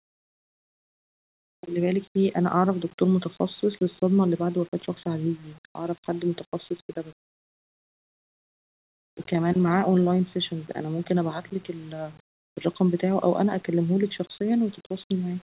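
No faults are present in this speech recording.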